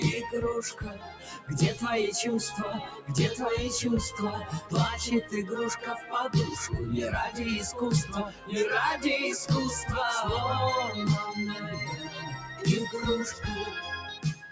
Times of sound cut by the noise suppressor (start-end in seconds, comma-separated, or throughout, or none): 0.69-1.49, 2.83-3.09, 4.42-4.72, 5.79-6.13, 8.04-8.52, 11.97-12.63, 14.15-14.51